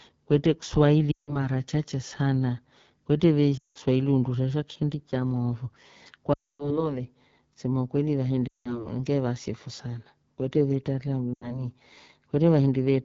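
AMR wideband (HD Voice) codec throughout: the roughness fits a low rate near 8.85 kbit/s, where the pulse-driven vocal tract model leaves speech plainly raspy.

Lost AMR speech frames at 1.12–1.39, 3.58–3.77, 6.33–6.89, 8.47–8.93 and 11.34–11.68 s: the decoder stretched the last good frame with falling gain, so each gap fades to near silence within two frames and returns rough.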